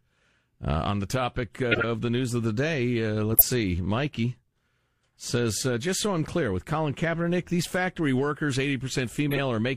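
Corrupt frame decoded at 1.71–1.84 s, after "the topic uh"; 3.32–3.42 s, after "of the day uh"; and 9.29–9.38 s. Damaged frames were played anyway, giving short chirpy noise bursts, the middle one the loudest. On a spectrogram they are brief, misplaced vertical smears; on the waveform, sudden spikes.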